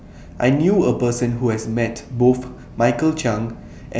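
No technical faults are audible.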